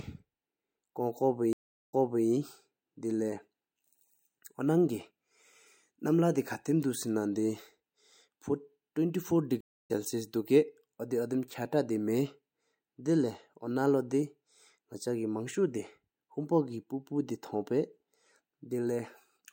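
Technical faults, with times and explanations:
1.53–2.27 s and 9.61–9.91 s, stream reconnect: the speech drops to silence for 370 ms and then 209 ms as the connection breaks and the player reconnects, starting a new decoder partway through the stream. At the first break the server resends a burst of buffered audio, so speech resumes 366 ms earlier and a short stretch repeats. At the second it rejoins live, about a fifth of a second later, so that stretch is lost.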